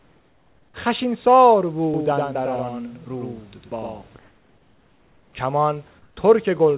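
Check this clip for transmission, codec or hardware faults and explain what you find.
Two kinds of fault are present, heard over a narrowband call path whose band stops at 4 kHz, consistent with G.711 mu-law.

Comfort noise in place of the background, 0.00–0.74 s, 4.19–5.33 s and 5.99–6.17 s: in each pause the real room noise gives way to a flat, featureless hiss, about 5, 4 and 3 dB quieter respectively. This is likely discontinuous transmission, with the receiver synthesising noise while the sender stays silent.

Doubled audio track, 1.94–4.02 s: a second full-band copy of the speech trails the original by roughly a tenth of a second, a few dB quieter, with no room colour, and it starts and stops abruptly. The likely cause is a second, slower capture path mixed in.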